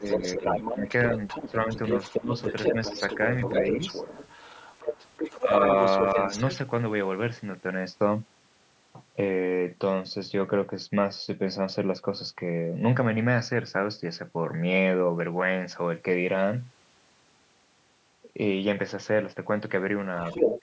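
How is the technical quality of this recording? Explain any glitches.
The recording has two call-related problems, both clustered in the first six and a half seconds, with a brief recurrence at the very end. The call's microphone processing leaves nothing above 8 kHz.

Speech suppressed in double talk appears four times: 0.0 to 0.85 s, 1.47 to 1.69 s, 2.15 to 2.34 s, and 5.41 to 5.5 s. The talker's level dips in short patches, briefly at the start and later by around 5 dB, with the deepest cut, near 20 dB, at 2.15 s. The likely cause is an echo canceller that heard both ends at once and attenuated everything it couldn't separate. A waveform shows sudden notches in the envelope, and a spectrogram shows brief vertical gaps or faded bands.

The other side's voice leaking through runs from 0.03 to 6.56 s and again from 20.18 to 20.61 s. A second voice sits under the talker, around 5 dB quieter in the long stretch and somewhat louder than the talker in the final half-second. 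This is likely residual loudspeaker echo that the canceller failed to subtract from the microphone. On a spectrogram it shows as a separate, overlapping set of harmonic traces, and the closing segment appears as a distinct burst of energy.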